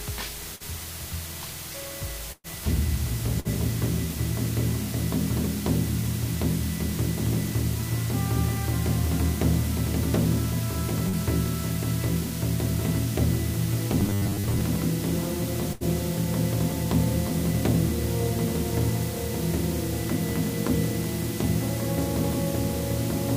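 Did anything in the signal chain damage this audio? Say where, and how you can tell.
Yes. The whole clip carries a constant, even hiss at roughly 10 dB below the signal, with no grainy distortion riding on the sound itself. That is low bit depth with dither, introduced at a sample-format conversion stage. The audio was reduced to about 5 bits, and dither was added before rounding, so the quantisation error became steady white noise instead of signal-correlated distortion. The hiss floor is high enough to sit close under the programme throughout.

Four bursts of packet loss show up, all network-stage damage. They occur at 0.55 to 0.63 s, 2.32 to 2.47 s, 3.40 to 3.48 s and 15.73 to 15.83 s. Each time the receiver extended the last sound and let it decay, then resumed later with audio missing. The concealment ran about 46 ms, 118 ms, 49 ms and 77 ms. The gaps skipped were 40 ms, 120 ms, 40 ms and 80 ms. 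The longest burst, at 2.32 s, outlasted its concealment and dropped to about 30 ms of silence.

At 11.09 to 11.16 s there is a short concealed packet loss, again a network-stage fault. Around 40 ms of audio never arrived in time. The decoder bridged it with about 39 ms of continuation built from the preceding sound, then blended back into the real stream. The result is a brief smear rather than an audible gap, with a small piece of the original missing.

From 14.00 to 14.61 s the sound turns into a rigid, metallic buzz at 100 Hz that still roughly tracks the underlying audio. That is robotic sound from repeated short buffers, most likely at the driver or buffer stage. A 100 Hz buzz fits a 10 ms block being replayed over and over while fresh audio arrives too seldom. Most of that stretch is repeated material, and the real audio in between is skipped.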